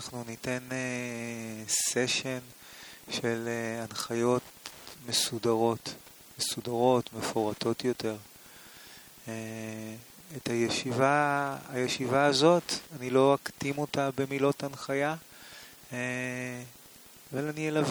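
A faint, steady ticking runs under the audio for the whole clip, about ten clicks a second and roughly 30 dB below the main sound. This is Wi-Fi interference: a nearby Wi-Fi radio's beacon, repeating every 102.4 ms, is being rectified by the audio circuit.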